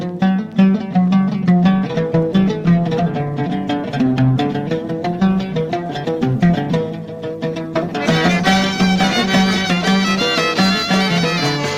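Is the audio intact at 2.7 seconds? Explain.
No. At 2.7 s there are more codec artefacts. This is an adaptive stream at a lower bitrate, from 1.64 to 9.64 s, switching suddenly and without a gap. The connection slowed, and the sound fits a drop from 64 to 24 kbit/s Opus.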